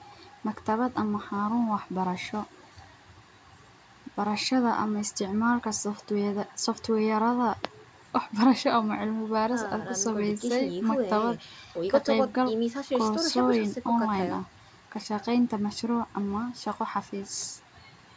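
The clip is speech, and nothing is technically wrong with it.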